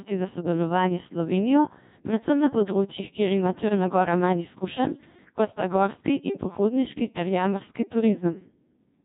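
Robotic, buzzy and heavily degraded throughout, the speech carries the sound of the Codec 2 vocoder. The decoder rebuilds the voice from sine waves using only pitch, voicing, energy and a spectral envelope, discarding the real waveform. The coarseness fits a 1.6 kbit/s mode.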